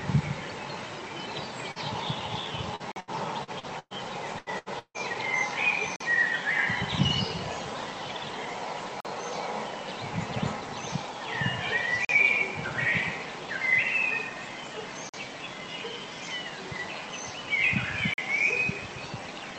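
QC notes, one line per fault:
1.71–1.79 s, short concealed packet loss: about 40 ms of audio never reached the decoder in time. The receiver bridged the hole with 42 ms of sound extended from what came just before, then blended back into the real signal, leaving a brief smear.
2.76–3.93 s, repeated packet loss (robotic sound): five separate losses strike this stretch, removing about 320 ms in total, the longest hole 116 ms. Each gap is patched by continuing the previous sound, so 27% of the span is synthetic fill, giving a choppy texture.
2.92, 5.96, 9.00, 12.05, 15.09 and 18.14 s, gap between chunks: a 44 ms hole recurs every 3.0 s, which fits playback in 3-second chunks with padding or a late start at each join. Nothing is lost, but the flow breaks at regular intervals.
4.39–4.49 s and 4.58–4.72 s, burst of packet loss: two losses of about 80 ms each, filled with 79 ms and 76 ms of continued, fading sound. 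The second loss also adds 9 ms. After each, playback resumes further on, with the intervening material gone.
4.79–4.97 s, long network dropout: about 160 ms of audio disappears. The last sound is drawn out for 155 ms, fading away, and about 70 ms of that is silence before the signal returns further on. This is likely a network interruption during which nothing arrived.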